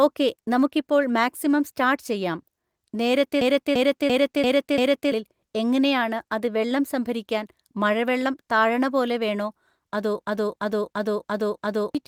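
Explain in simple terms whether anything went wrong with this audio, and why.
Yes, a system hang loop struck twice: from 3.41 to 5.12 s, just before "എങ്ങനെയാണ് അത് വെള്ളം സംഭരിക്കാൻ", and from 10.24 to 11.95 s, after "താഴണ പോലെ വേണോ അതോ". The system froze while the sound hardware kept replaying the same 0.34 s piece, fitting a 16384-sample buffer, five times at about three per second, giving a stutter. About a second and a half of speech is lost each time.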